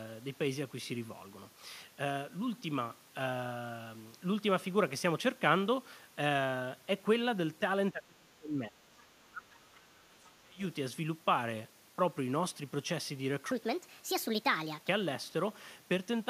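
From 7.91 to 10.61 s, the speech is pushed down hard. It dips, thins out and drops away in pieces. At its deepest the level falls by around 30 dB, and the damage spans about three seconds. This is speech suppressed in double talk. The likely cause is an echo canceller meeting both sides talking at once. Unable to tell the near talker from the loudspeaker echo, it turned everything down together.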